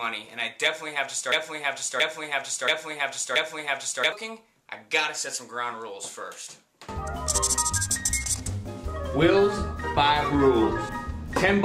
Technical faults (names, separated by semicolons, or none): broken-record loop